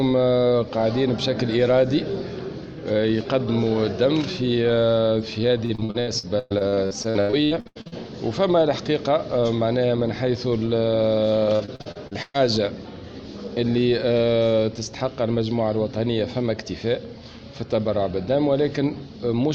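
The audio breaks into choppy, robotic sound from 5.65 to 7.94 s and again from 11.56 to 12.36 s. This is repeated packet loss (robotic sound): data kept arriving late or not at all, and each hole was filled by stretching the last sound. About 40% of each stretch is patched, with gaps up to about 0.12 s. Unlike a single dropout or steady codec warble, the damage comes in rapid bursts.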